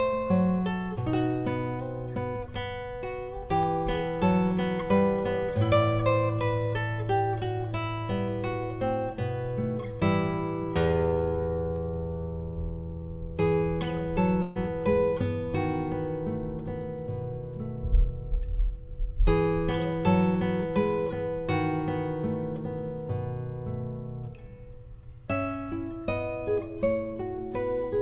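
At 14.42 s the sound stalls into a held, fading smear for about 130 ms before picking up at 14.57 s, with roughly 140 ms of audio gone. This is a burst of packet loss. The receiver stretched the last sound across the gap instead of the missing packets, all within a band that stops at 4 kHz.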